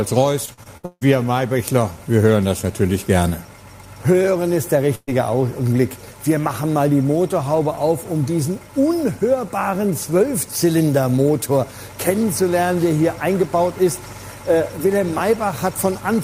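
From 0.45 to 1.03 s there is repeated packet loss, producing a robotic sound. Five separate gaps fall within this stretch, the longest about 160 ms, and together they account for roughly half of it. Each hole is filled by extending the preceding sound, and the next dropout arrives before the signal settles. The result is choppy audio with pieces missing, and about 300 ms of the original sound is missing.

At 4.95 s a burst of packet loss removes about 120 ms of audio, ending at 5.09 s. The receiver bridges the gap by continuing the last sound while lowering its level. That concealment fades out completely, leaving roughly 40 ms of silence before playback resumes. What follows is further along in time, so the stretch in between is lost and the transition sounds like the last sound dying away into a jump.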